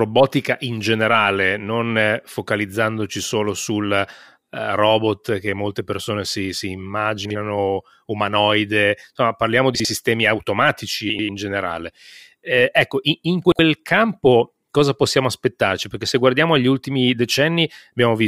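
Frames out of order: neighbouring blocks of speech frames were decoded in swapped order at 7.25, 9.75, 11.09 and 13.45 s, with blocks of 48 to 96 ms. Each stretch plays with its halves exchanged, a brief garbled flutter, and no time is lost.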